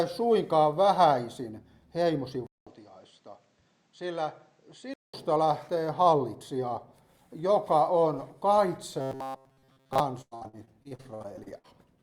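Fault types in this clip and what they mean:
input switched to a poorer device: sound likely moves to a weaker input after a 200 ms silence, dulled, about 5 dB quieter, with new hiss; spectrogram shows a flat ceiling.
robotic sound from repeated short buffers: short stretches likely replayed over and over, most of it repeated, impose a rigid 133 Hz buzz; spectrogram shows evenly spaced harmonic stripes.
repeated packet loss (robotic sound): 14 holes, longest 99 ms, patched by stretching earlier sound, about a third of the span; waveform looks choppy with copied segments.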